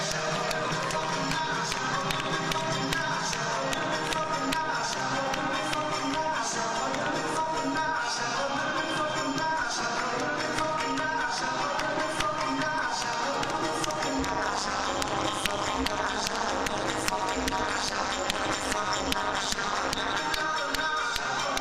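From 14.19 to 20.19 s, overlap-add ripple: short windowed frames were rejoined with overlaps not summing to constant gain, so level swings about 60 dB once per frame, around 200 Hz. That fast rate yields a metallic buzz with added tones, not the rough tremolo of long frames.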